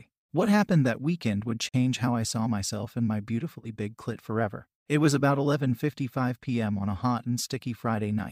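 Speech clip with one gap at a join of encoded pieces. At 1.69 s the sound drops out for about 50 ms, from 1.69 to 1.74 s. The edges are smeared by the codec. Then the speech resumes where it stopped. Two separately encoded segments were joined without trimming their padding.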